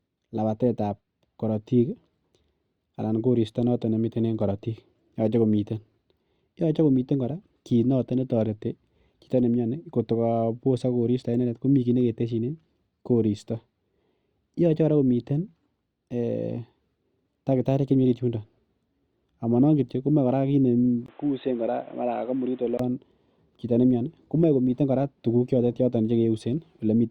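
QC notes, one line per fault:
21.06–22.79 s, input likely switched to a poorer device: after a 20 ms gap, sound turns dull and boxy, nothing above 4 kHz, quieter, new background noise.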